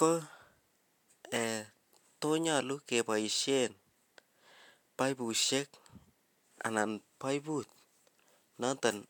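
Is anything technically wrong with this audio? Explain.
No, nothing technically wrong stands out anywhere in this speech recording, so there's nothing here to flag.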